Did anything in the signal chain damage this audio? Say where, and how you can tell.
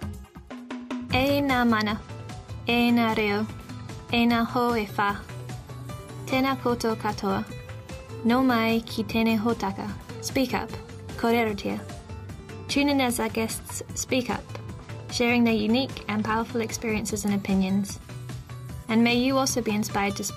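No, the signal chain shows no damage.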